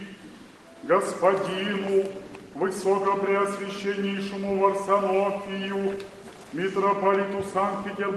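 Nothing stood out on listening to this audio.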